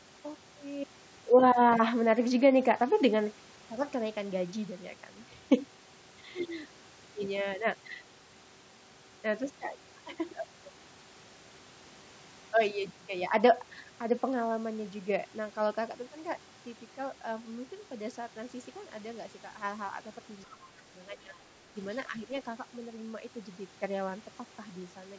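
At 20.46–20.6, 21.14–21.36 and 22.1–22.29 s the speech dips by about 10 to 15 dB, likely speech suppressed in double talk by an echo canceller, showing as brief notches in the waveform envelope and faded spectrogram bands.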